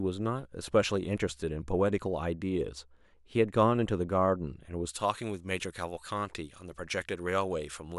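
From 4.89 s to the end of the clip at 7.99 s, the speech turns thin, bright and hissy, with sibilants pushing forward and very little body underneath. This is pre-emphasis left on: a treble boost added for recording or transmission was never undone by the matching de-emphasis. Here the top end sits about 11 dB higher at 10 kHz than at 1 kHz, a tilt that fits the J.17 emphasis curve.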